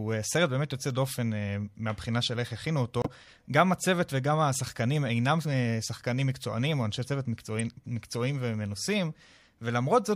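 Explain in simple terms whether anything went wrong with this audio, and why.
Two things went wrong in this speech clip, both from damaged data in the compressed file.

At 3.02 s there's a corrupt frame muted. One chunk of the compressed stream got scrambled, the decoder couldn't make sense of it, and the player just dropped in silence instead. You hear the sound cut out abruptly for about 60 ms, then pick up again right where it should, so the timing doesn't drift. It's a quick gap, like a tiny hiccup.

At 7.59 s there's a corrupt frame decoded. This time the damaged chunk slipped past the decoder and got played as if it were fine. Because some of its numbers were garbled, energy landed at the wrong pitches for a split second. The result is a very short blip or squeak that doesn't belong to the speech.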